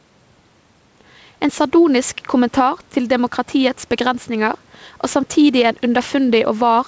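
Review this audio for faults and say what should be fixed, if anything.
The level pumps by roughly 5 dB under loud speech throughout. This is gain pumping, likely excessive input gain driving a fast limiter. To prevent it, lower the microphone gain so the limiter seldom engages.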